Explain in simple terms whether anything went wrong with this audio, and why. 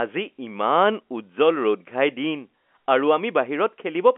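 Nothing went wrong: the speech has the narrow, slightly boxy sound of ordinary G.711 telephone coding, which keeps only the middle of the pitch range, roughly 250 Hz to 3.4 kHz, and that is just how a normal phone line sounds.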